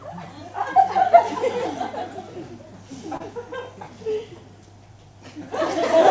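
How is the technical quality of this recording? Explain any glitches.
One glitch stands out, a short concealed packet loss from 3.17 to 3.23 s. About 30 ms of audio failed to reach the decoder in time, so the receiver extended the preceding sound to cover the gap and then faded back into the real signal. This leaves a brief smear or wobble where the original detail is missing. The band-limited character throughout, with nothing above 8 kHz, fits a wideband call codec such as G.722 at 64 kbps.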